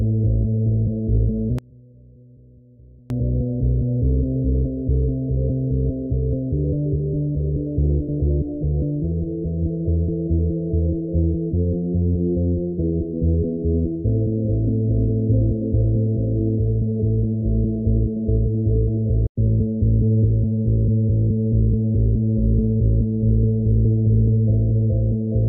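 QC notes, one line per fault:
1.59–3.10 s, one channel inverted: heard in mono, the centred content nearly vanishes, dropping about 26 dB to a faint residue, likely from reversed polarity on one side. On a waveform the summed level collapses to near silence.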